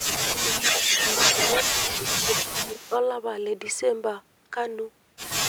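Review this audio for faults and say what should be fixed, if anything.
Speech suppressed in double talk occurs twice. From 0.23 to 0.62 s the speech dips by around 10 dB for roughly a third of a second, and from 1.64 to 2.92 s it drops deeper, around 15 dB, across about a second in total. The likely cause is an echo canceller that cannot tell the near talker from loudspeaker echo while both sides speak, so it attenuates everything. Fix by tuning the double-talk detector and limiting how hard the suppressor ducks during overlap.

Echo leak is audible from 0.63 to 1.63 s as a delayed copy of the speech trailing by 176 ms, sitting a few decibels above the direct speech. A second, much fainter trace, about 20 dB down, appears from 2.67 to 2.99 s at the same 176 ms lag. This is likely residual loudspeaker pickup that the far end's echo canceller failed to remove and sent back. Fix by letting the canceller's adaptive filter converge properly on that path, with enough tail length, plus stronger residual-echo suppression.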